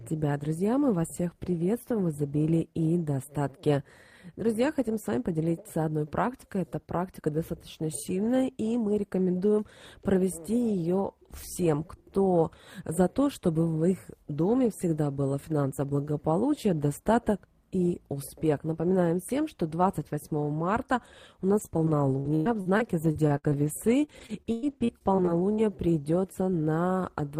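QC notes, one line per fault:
21.59–25.60 s, repeated packet loss (robotic sound): 21 gaps in about four seconds, the longest 106 ms, leave the sound choppy. Each hole is patched by extending the preceding sound, so about 18% of this span, roughly 0.7 s, is rebuilt rather than real. Unlike a single dropout, the holes recur in quick succession, and the concealment gives them a robotic texture instead of silence.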